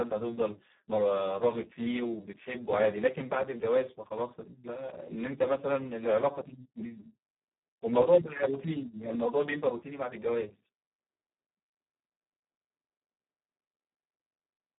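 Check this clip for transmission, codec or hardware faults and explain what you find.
One fault runs through the whole recording: Speex codec damage at a very low setting. Its coarse excitation coding makes the speech hoarse, noisy and robotic, consistent with roughly 4 kbps. A spectrogram shows a 200 Hz to 3.6 kHz band, empty above 3.8 kHz, with smeared harmonics.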